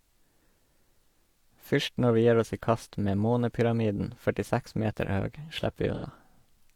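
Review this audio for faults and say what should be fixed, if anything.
AAC frame loss with concealment at 5.94 to 6.04 s. For roughly a tenth of a second the speech turns smeared and phasey, with a noisy, washed-out texture instead of clear detail. The decoder lost data covering about 85 ms, which fits two consecutive AAC frames, and patched the gap by reusing the last good spectrum with scrambled signs or interpolated energy. Because the gap is short, it comes across as a brief smeared patch rather than a fade to silence. Protect the AAC stream from packet loss with forward error correction or retransmission so frames arrive intact.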